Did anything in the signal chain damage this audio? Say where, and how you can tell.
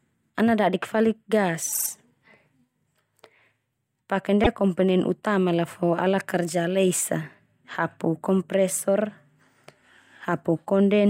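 Yes, repeated frames at the codec or storage stage: after "ana dadik falik", 1.72–1.87 s, a 48 ms block replays three extra times; at 4.43–4.47 s, before "komponen utama la fo", one 24 ms block repeats once. These are exact stuttered copies that lengthen the audio, not silent dropout gaps.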